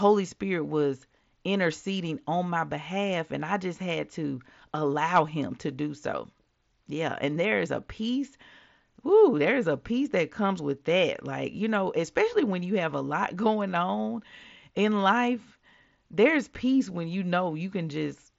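Speech, with no technical faults to be heard.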